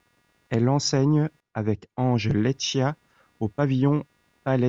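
Computer activity noise runs throughout the clip as a faint buzz pulsing at around 200 Hz, far below the speech. Changing processor or graphics load is disturbing the ground the audio circuit shares, so the buzz follows the machine's activity rather than the talking.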